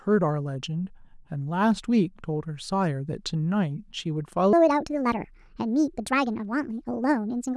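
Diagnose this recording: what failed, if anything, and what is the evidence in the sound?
A section at the wrong speed runs from 4.53 s to the end: the speech suddenly hurries and rises about seven semitones, playing 1.57 times too fast. Speed and pitch shift together, so this is likely a playback-stage clock or sample-rate mismatch.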